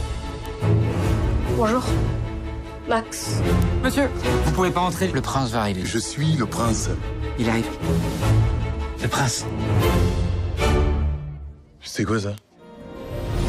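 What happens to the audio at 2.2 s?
Nothing goes wrong at 2.2 s; the audio carries on intact through that moment.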